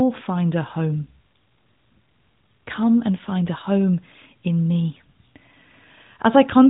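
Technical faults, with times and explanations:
No technical faults can be heard in this speech clip.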